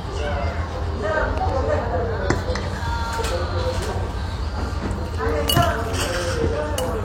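At 1.38 to 1.51 s, two loud pops sit in quick succession around 10 dB above the sound. A single, louder pop follows at 5.48 to 5.50 s, roughly 15 dB up. Each is likely a voltage pulse from a plug, switch or static. Unlike a dropout, the sound carries on unbroken underneath.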